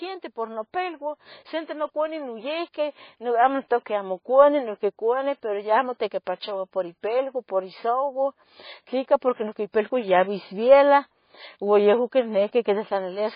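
From start to finish the speech sounds watery and swirly, with a metallic chirping that flickers around the s sounds and consonant attacks that smear rather than snap. The treble is cut off sharply, with nothing above 5 kHz. This is likely heavy MP3 compression. Starved of bits, the encoder chopped the top end at a fixed frequency and zeroed weak frequency lines that flick on and off between frames. The damage points to a very low bitrate, around 18 kbps.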